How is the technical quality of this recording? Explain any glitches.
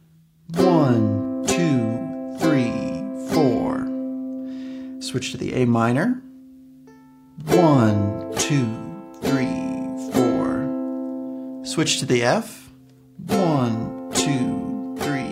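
The recording has one glitch, near the end. From 13.61 s to 15.23 s there are periodic USB or driver dropouts. A background task stalls the audio path every 0.125 s, and each time a tiny fraction of a millisecond of audio is skipped. This produces about fifteen evenly spaced ticks, eight per second, heard only where sound is present.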